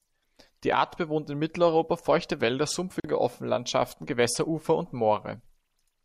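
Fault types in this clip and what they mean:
Gap at a join of encoded pieces: separately encoded pieces were joined untrimmed, leaving about 44 ms of silence at 3.0 s. Speech then resumes where it stopped.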